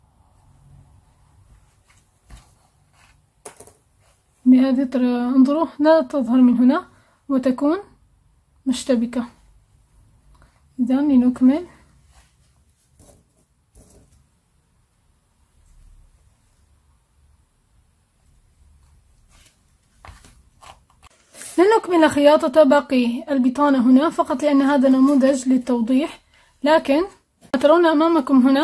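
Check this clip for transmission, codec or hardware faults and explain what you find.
No transmission, codec or hardware faults turn up anywhere in the clip. Nothing in the audio calls for further comment.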